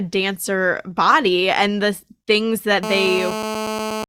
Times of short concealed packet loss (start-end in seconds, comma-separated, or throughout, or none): none